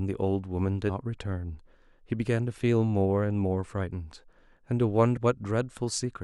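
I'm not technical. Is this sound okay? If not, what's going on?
No. This speech recording has damaged data in a compressed stream. It happens twice, from 0.88 to 0.90 seconds and from 5.16 to 5.18 seconds. The audio was stored in a squeezed-down file format, and some of the data in those spots got spoiled. When the player reaches bad data, it can't make sense of it and scrambles to find its place again. You hear a brief chirp, squawk, click or short gap each time.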